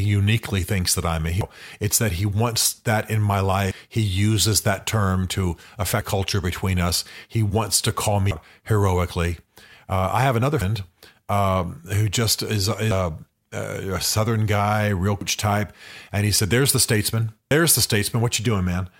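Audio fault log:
1.41, 3.71, 6.01, 8.31, 10.61, 12.91, 15.21, 17.51 s: audio missing between chunks. Regular skips every 2.3 s, each dropping roughly a fifth of a second with sides butted together, likely from 2.5 s chunk boundaries.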